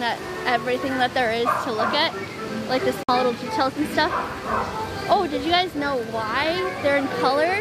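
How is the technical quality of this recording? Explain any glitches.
One glitch is audible: a Bluetooth dropout from 3.03 s to 3.09 s. The sound cuts to silence for 53 ms, then resumes further along, as if it had continued playing. The likely cause is a few wireless packets arriving too late and being discarded.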